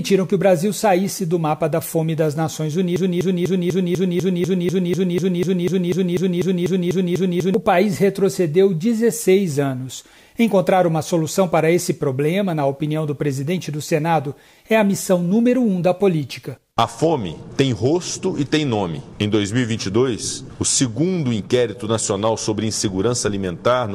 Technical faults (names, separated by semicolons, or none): broken-record loop